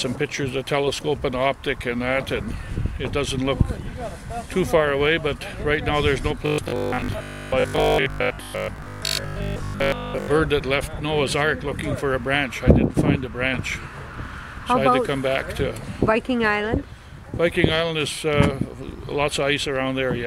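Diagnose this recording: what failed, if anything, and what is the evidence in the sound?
A metallic 50 Hz buzz covers most of 6.46 to 10.28 s: robotic sound from repeated short buffers, likely a starved driver buffer repeating 20 ms blocks.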